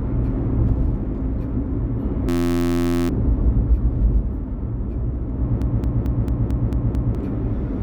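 At 2.29 s the sound gives way to a steady buzz that lasts until 3.09 s. That's a system hang loop: the computer or driver froze, and the sound hardware kept cycling the same tiny stretch of its ring buffer. Each pass is 11.61 ms, which fits a 512-sample buffer, so it repeats 69 times at about 86.1 Hz and you hear a pitched drone rather than a stutter. Around 0.7 s of real audio just never made it out.

Later, from 5.62 s to 7.15 s, you get a broken-record loop. A 222 ms fragment plays back to back, exactly the same each time, seven times over, giving a choppy, rhythmic stutter instead of a buzz. The likely cause is the player, encoder or stream stalling and re-sending the last piece it held, so whatever should have played across that second and a half is gone.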